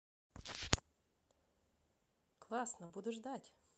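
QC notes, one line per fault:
2.85–2.92 s, short concealed packet loss: about 40 ms of audio missed the decoder, which extended the preceding sound to fill the gap, leaving a brief smear.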